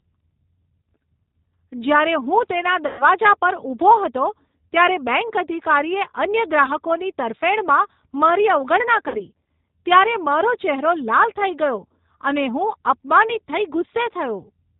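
From start to finish the speech passes through a G.729 codec, which fits G.729A at 8 kbit/s. The encoder discards the waveform and keeps only a vocal-tract filter, a pitch predictor and a handful of pulses per 10 ms frame, so nothing above 4 kHz survives. The result is plainly audible: the speech is band-limited and dull, with a rough, slightly synthetic grain on every syllable.

At 2.87 s, just after "હું તેના", VoIP packet loss concealed by the speech codec begins. About 120 ms of audio never arrives, which fits six 20 ms packets. The decoder keeps repeating its last pitch and filter with falling gain, so the sound smears into a buzzy tone or coloured noise that fades until 3.05 s. It then takes a moment to regain its strength.

At 9.08 s, after "ગ્રાહકોની તરફેણમાં મારી અવગણના", a shorter gap of about 60 ms is concealed the same way. It produces a brief stretch of stretched, fading sound that ends at 9.21 s.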